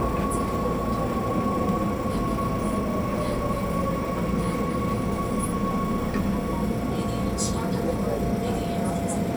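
No technical faults can be heard anywhere in this audio.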